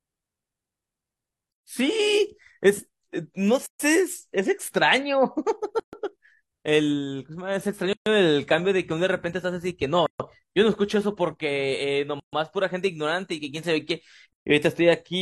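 It's a speech recording with a gap at a join of encoded pieces recurring through it: silences of about 0.13 to 0.14 s open at 1.52, 3.66, 5.80, 7.93, 10.06, 12.20 and 14.33 s. The speech was encoded in roughly 2-second chunks and butted together untrimmed, so each chunk's encoder delay and last-frame padding stay in as a hole with smeared edges before the speech resumes.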